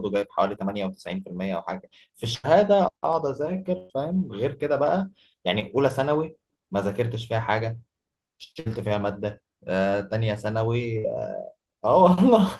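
At 0.55 s, short concealed packet loss. About 20 ms of the call arrived too late. The receiver stretched the preceding sound to cover it, then blended back. It heard as a brief smear. The same fault recurs at 5.60 s.

Between these, at 2.34 to 2.46 s and 3.78 to 3.92 s, come bursts of packet loss. About 100 and 120 ms went missing. Concealment held the last sound and faded it, giving a buzz or fading hiss before the audio jumps ahead.

Two shorter bursts follow, at 8.60 to 8.67 s and 10.98 to 11.06 s. Each drops about 60 ms. The held tail is briefer, but the audio still resumes past the lost stretch.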